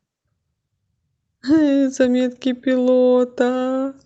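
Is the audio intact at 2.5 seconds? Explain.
Yes, the speech at 2.5 seconds plays through intact, with no dropout, click, distortion or other fault at that moment.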